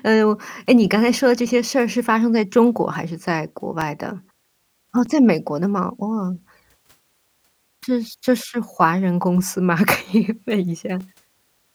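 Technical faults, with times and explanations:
3.81 s, 5.06 s and 11.00 s: block of digital silence. The audio drops to nothing for about 5.8 ms, 5.8 ms and 2.2 ms, too short to hear as silence, so each comes across as a tick or dip. The first two match a 256-sample buffer left unfilled, or possibly invalid calculation output.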